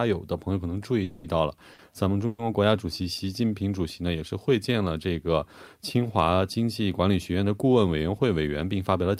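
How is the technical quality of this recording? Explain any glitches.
The speech has three timing glitches in its first few seconds, where the audio pauses and then resumes from the same point.

From 1.03 to 1.27 s and again from 2.27 to 2.42 s there is a call audio freeze. Packets were likely delayed and the jitter buffer emptied. The receiver extended the last sound as a fading buzz for about 210 ms and 120 ms, with nothing lost.

At 1.74 to 1.82 s a short stall from a late packet holds a sound for about 50 ms, with a slight buzz. The receiver bridged the gap until the packet arrived, then continued with nothing lost but a little added delay.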